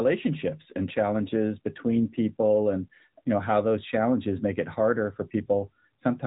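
From start to finish the speech carries the sound of the AMR narrowband mobile codec. Nothing above about 3.8 kHz survives, so consonants lose their crispness and the voice sounds boxed in, like an old phone call. The codec rebuilds speech from a vocal-tract model fed by sparse pulses, and the damage is plainly audible. The voice has a buzzy, synthetic edge, which fits AMR-NB running at its 10.2 kbps mode.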